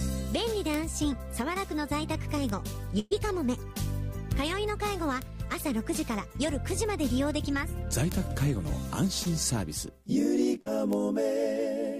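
You'll catch six isolated ticks at 0.74, 2.49, 4.32, 5.22, 8.12 and 10.93 s. Each is a bit error spike: a single corrupted sample that jumps by a power of two and snaps straight back, so it's a sharp broadband click with no relation to the surrounding sound. From 2.99 to 3.13 s there's a burst of packet loss. About 100 ms of audio never arrived, and the receiver stretched the last sound over roughly 115 ms, fading it as it went, before picking up again further along with that stretch gone. Two shorter hiccups at 9.23–9.27 s and 10.61–10.68 s are short concealed packet loss. About 20 ms and 40 ms went missing, patched by continuing the prior sound and blending back, which comes across as a quick smear or wobble.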